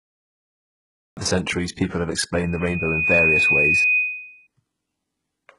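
Digital silence runs until 1.17 s. Speech then cuts in at "the centuries people have" with no natural attack. This is a cut-off start.

Throughout, heavy codec damage colours the speech. Nothing sounds above 11.1 kHz. S sounds turn gritty and metallic, likely from HE-AAC compression at a low bitrate around 12 kbps.

From 2.37 s to 4.47 s, a loudspeaker feedback squeal rises. A 2.5 kHz tone swells over roughly 0.7 s to about 5 dB above the speech.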